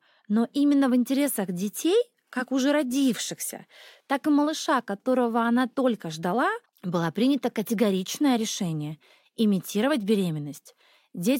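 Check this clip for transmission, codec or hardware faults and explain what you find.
Listening closely, I find no faults anywhere in this speech recording. There is nothing to report or explain.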